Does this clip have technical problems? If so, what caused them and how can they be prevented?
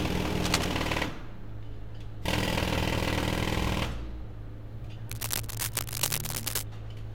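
Yes. Cable scratch noise appears from 0.38 to 0.70 s and from 5.08 to 6.63 s. Dense, uneven scratching rides over the sound, roughly as loud as the sound itself. A worn cable or connector being moved is the likely cause, with contact resistance jumping rapidly. Replacing worn leads and keeping connections still while recording prevents it.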